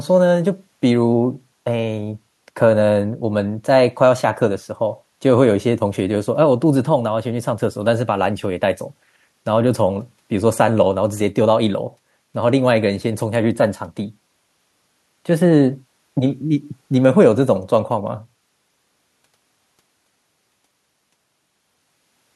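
No technical faults can be heard in this recording.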